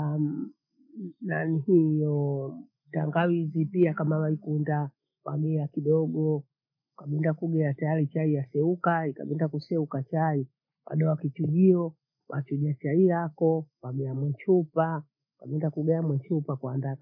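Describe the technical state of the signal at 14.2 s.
At 14.2 s the speech signal is intact, with no audible fault at that moment.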